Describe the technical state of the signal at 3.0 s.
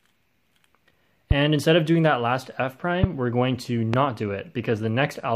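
A sudden voltage step, likely from a switch, plug or static discharge, enters the signal path between 3.04 and 3.06 s and produces a single loud pop. The sharp pulse stands well above the surrounding sound, which carries on underneath it.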